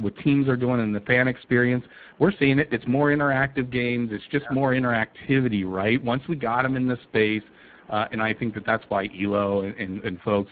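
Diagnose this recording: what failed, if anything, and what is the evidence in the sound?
The fault is at the codec stage: the speech was encoded with the Speex codec at a low quality setting, which fits a bitrate near 10 kbps. Too few bits reach the excitation, so the speech sounds plainly noisy and hoarse throughout, over room noise about 32 dB down.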